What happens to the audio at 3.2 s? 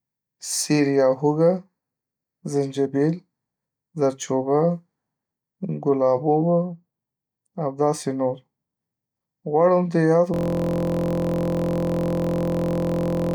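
Nothing goes wrong at 3.2 s; the speech carries on intact through that moment.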